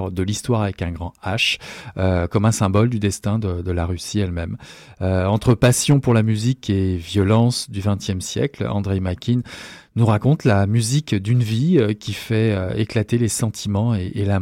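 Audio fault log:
2.36–3.05 s, 5.29–6.19 s, 7.19–7.40 s, 10.03–10.54 s and 11.76–11.79 s, hard clipping. Speech peaks exceed a stage's limit by about 2 dB and are cut flat. The flat tops add high harmonics, heard as crackle on loud syllables, as just before "de euh de la".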